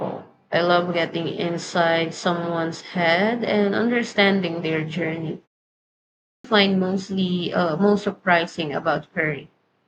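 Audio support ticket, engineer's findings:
Clipped start after a pause at 5.97 s. The first 474 ms of speech after a 0.58 s gap is swallowed, and audio resumes abruptly at 6.44 s. Probable component: the output device, which sleeps during silence and is slow to wake or relock. Waveform: a hard-edged onset with no ramp at 6.44 s. Spectrogram: energy begins as a sharp vertical edge, missing the first sounds of the speech.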